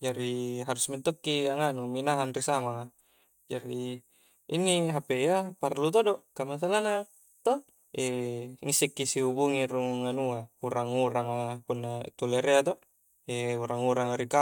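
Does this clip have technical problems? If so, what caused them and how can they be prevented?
No, nothing stood out as a technical problem on listening to this speech clip, so there is no cause to trace or anything to prevent.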